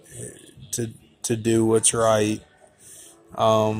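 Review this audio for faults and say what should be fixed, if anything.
Nothing here needs fixing, since I couldn't hear a single fault anywhere in the clip, so it's fine to leave as it is.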